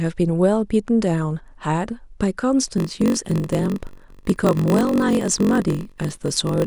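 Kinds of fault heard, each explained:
block size mismatch (padded): From 2.76 s to the end, one stage delivers shorter blocks than the next reads, and zeros fill each gap. This causes a 46.9 Hz buzz, fitting 1024-sample reads. Speech slows to 0.938 times normal speed, with timbre kept.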